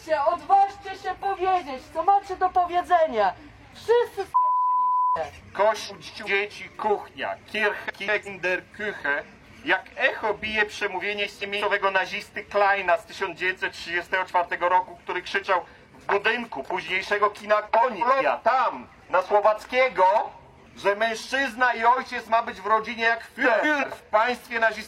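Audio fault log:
5.89–6.28, 7.89–8.28, 11.23–11.62, 17.82–18.22 and 23.44–23.84 s, frames out of order: each time two neighbouring blocks of about 186 ms trade places, so the stretch plays back-to-front in halves. You get a garbled flutter, and nothing is lost in time.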